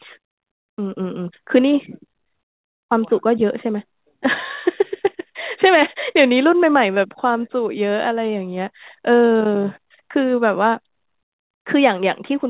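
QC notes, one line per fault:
No faults are heard anywhere in this speech. It has come through a call path, and the band stops at about 4 kHz, which fits a narrowband G.711 mu-law call.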